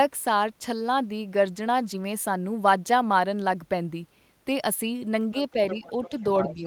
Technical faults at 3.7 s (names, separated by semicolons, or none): none